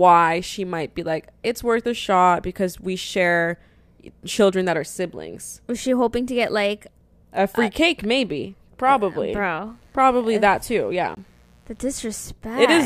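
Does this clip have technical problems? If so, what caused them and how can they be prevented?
Yes. From 9.63 to 11.95 s a mains buzz sits about 40 dB under the speech: switching spikes twice per 60 Hz cycle spread harmonics into the kilohertz range, so it rasps rather than hums like a pure 60 Hz tone. Shielded cabling and keeping dimmers off the audio circuit prevent it.

From 11.15 to 11.17 s a 20 ms block of digital silence cuts the sound out with no fade. The output buffer most likely wasn't filled in time, so a larger buffer would prevent it.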